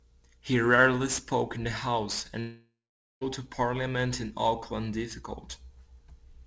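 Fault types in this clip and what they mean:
Sample clock jitter: the converter's timing wanders by a few microseconds, so samples land slightly off time, adding a rough hiss roughly 20 dB under loud, bright speech. A spectrogram shows faint broadband noise following the speech energy and vanishing in pauses.
Long network dropout: from 2.40 to 3.23 s the speech gives way to a fading buzzy continuation and then about 0.47 s of silence, likely from packets that never arrived. The waveform shows a decaying smear then a flat gap, blank on the spectrogram.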